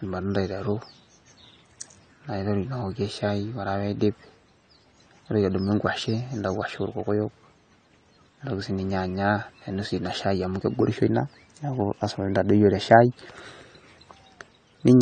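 From start to finish the speech is dull and smeared, with nothing above 9.1 kHz and a watery, warbling fizz on sibilants and held sounds. That points to likely AAC compression, AAC-LC at a rate that fits roughly 32 kbps, where the coder lowers its cut-off and starves bands it judges inaudible. A simple low-pass filter would dull the sound just as much but stay clean underneath. This texture shifts from frame to frame.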